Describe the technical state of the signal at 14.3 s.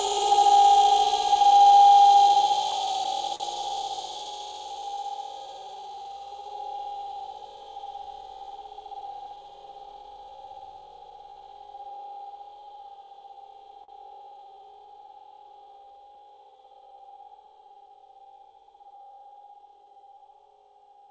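At 14.3 s you're inside a stretch of clock drift between sender and receiver. The sender's clock runs roughly 3% slow, so the receiver keeps running short and has to stretch things out.

That shows up as repeated timing corrections from 0.22 to 20.97 s. Small repeated slivers play the audio at about 98% speed and add roughly half a second overall, which is heard, if at all, as occasional hiccups or a slightly unsteady pace.

The same moment falls within scattered short gaps, 12.87 to 18.46 s. There are around seven small holes, none longer than about 40 ms, each patched by smearing the preceding sound forward, so you get brief ticks or smears.

All of this comes through the G.722 call path, which leaves nothing above 8 kHz.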